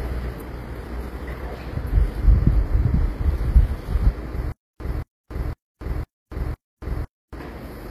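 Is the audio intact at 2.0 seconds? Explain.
No. At 2.0 s, as throughout the recording, there is plainly audible damage that is likely from HE-AAC compression, consistent with a low bitrate around 24 kbps. Only the lower spectrum is coded, and the treble is rebuilt from copied lower bands, so it is synthetic and ends at about 14.9 kHz.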